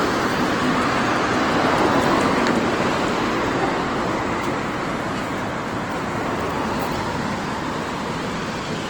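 From start to finish, the sound has a grainy, roughened texture. Tonal parts turn noisy and sandy instead of staying clean, and detail sounds smeared into hiss-like fill. The top end stays open, with content reaching up to about 20.2 kHz. The likely cause is Opus compression in its CELT music mode. Its damage is plainly audible and points to a starved bitrate of roughly 16 kbps. Without enough bits, the encoder keeps each band's energy but fills the band with folded or noise-like content, which produces the grain.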